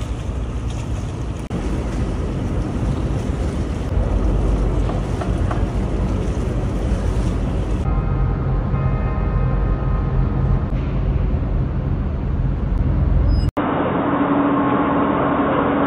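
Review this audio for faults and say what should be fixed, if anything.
At 13.49 s the sound drops out for 80 ms, then returns dull and boxy to the end at 15.87 s. Nothing remains above 3.8 kHz, with a faint new noise floor at much the same level. This is likely an input switched to a poorer device. Lock the recording input to one device so the system cannot swap microphones mid-take.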